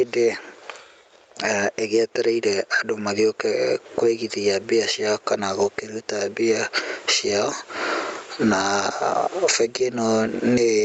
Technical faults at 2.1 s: gain pumping

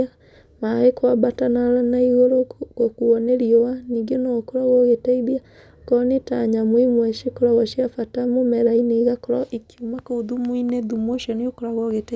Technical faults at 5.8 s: none

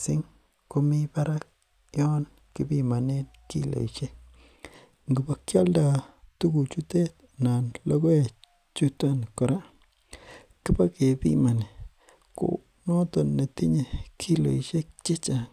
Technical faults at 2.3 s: none

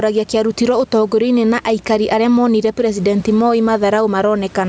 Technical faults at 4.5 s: gain pumping

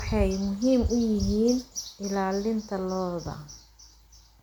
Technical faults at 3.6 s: generation loss

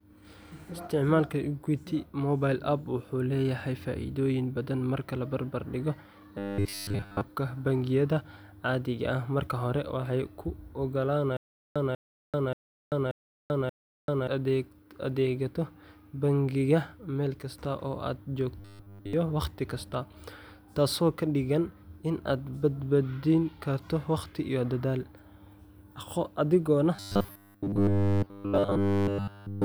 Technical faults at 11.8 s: stutter with silent gaps

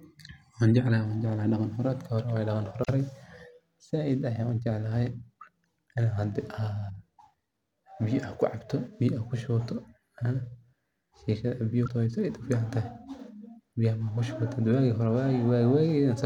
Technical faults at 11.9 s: damaged data in a compressed stream

